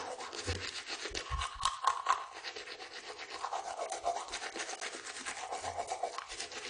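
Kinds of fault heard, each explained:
AAC compression: dull, smeared sound with nothing above 10.2 kHz, plus a warbling texture a clean low-pass wouldn't leave; likely AAC-LC coding near 32 kbps.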